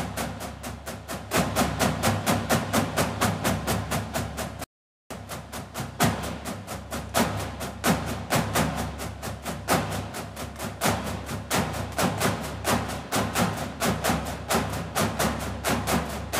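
At 4.64 s the sound cuts out abruptly and stays dead until 5.11 s, an audio dropout to silence lasting about 0.47 s. The gap holds no room tone at all, so it reads as silence rather than a quiet passage, and whatever was happening during it is lost. The likely cause is a broken input link or stray mute while recording continued. On a waveform it shows as a flat line; a spectrogram shows a fully blank vertical band.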